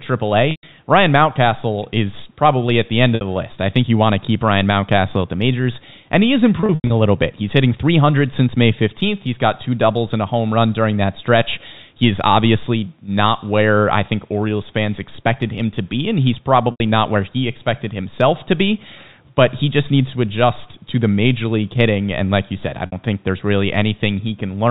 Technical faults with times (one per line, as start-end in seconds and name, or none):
0.51-0.63 packet loss with pitch repetition
3.15-3.21 packet loss with pitch repetition
6.60-6.90 packet loss with pitch repetition
16.71-16.80 packet loss with pitch repetition
22.86-22.92 packet loss with pitch repetition